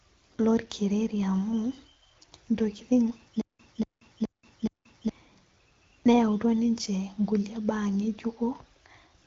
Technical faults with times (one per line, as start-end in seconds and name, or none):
3.41-5.09 stutter with silent gaps